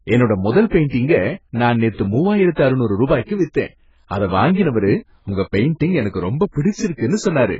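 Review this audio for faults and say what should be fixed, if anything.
AAC compression, throughout: nothing survives above 7.6 kHz and the speech sounds dull and smeared, likely from AAC-LC starved of bits, fitting about 12 kbps. To prevent it, encode from the original source at a much higher bitrate, or keep a lossless copy.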